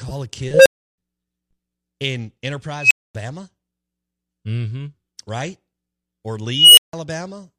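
At 0.54, 2.79 and 6.50 s, an unstable filter runs away. A low tone near 500 Hz, then tones near 3 kHz, swell over about 0.12, 0.12 and 0.27 s into clipping. Each then cuts to silence for 0.32, 0.24 and 0.16 s as the filter overflows and resets. Unlike acoustic feedback howl, each ends in abrupt silence.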